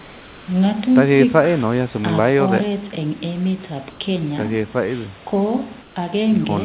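From 0.0 to 0.48 s, 3.9 to 4.0 s and 5.82 to 5.96 s, comfort noise replaces the background. The room noise becomes a steady, featureless hiss. It is about 2 dB quieter first, unchanged second, about 4 dB quieter last. Discontinuous transmission is the likely cause.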